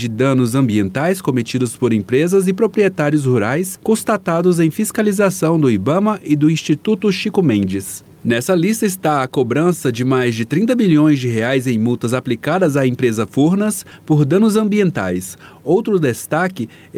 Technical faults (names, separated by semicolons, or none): none